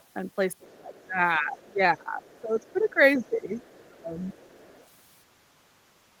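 A speech clip in which a faint second voice, the other side's voice leaking through, sits roughly 35 dB below the talker at 0.00–0.04 s and roughly 30 dB below at 0.71–1.00, 2.35–2.89, 3.65–3.77 and 4.22–4.87 s, likely because the echo canceller left part of the loudspeaker playback in the microphone signal. Between 0.62 and 4.35 s the talker's own level repeatedly sags, by as much as 20 dB and for around three seconds in total. This is speech suppressed in double talk, likely from the canceller turning down both sides while they overlapped.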